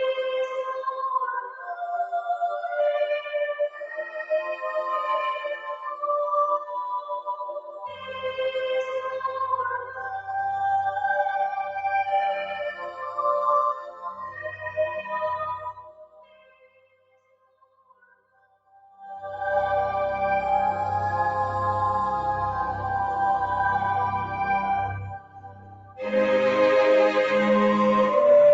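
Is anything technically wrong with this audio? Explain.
Yes. A noise suppressor meant for speech was left running on this audio. It treats held tones, ambience and decaying tails as noise, so the level swings by roughly 15 dB. Attacks come through while sustained parts sink, producing a pumping, thinning character. Unlike a deliberate fade, these dips follow the content itself rather than moving smoothly across the whole mix.

At specific moments the suppressor cut sound harder than elsewhere. The sustained or fading material dropped while sudden onsets survived:

1.43 to 1.76 s, about 10 dB down
3.69 to 4.64 s, about 13 dB down
5.36 to 6.04 s, about 9 dB down
6.59 to 8.23 s, about 14 dB down
12.51 to 13.2 s, about 8 dB down
13.74 to 15.12 s, about 10 dB down
15.58 to 19.0 s, about 16 dB down
25.07 to 26.01 s, about 16 dB down

The gentle fader-like level moves and the call path's top end stopping at 8 kHz are separate from these.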